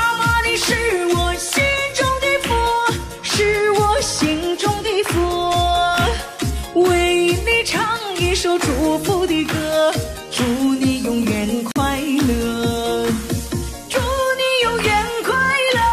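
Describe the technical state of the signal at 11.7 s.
At 11.72 s a gap between stream segments opens a hard-edged silent hole of about 43 ms, lasting to 11.76 s. Segment timestamps at a 6 s boundary fail to meet, and silence fills the difference.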